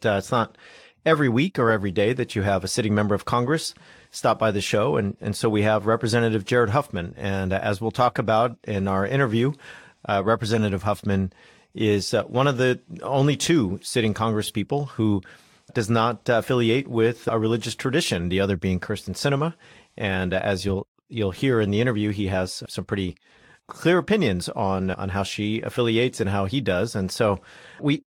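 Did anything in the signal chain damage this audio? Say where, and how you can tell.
Yes, at the codec stage. Corrupt frames were decoded at 1.12 to 1.16 s, 10.55 to 10.57 s and 14.46 to 14.50 s. Each brief burst peaks around -10 to -15 dBFS and spans one or two frames. Flipped bits gave wrong gains and codes, misplacing energy in frequency.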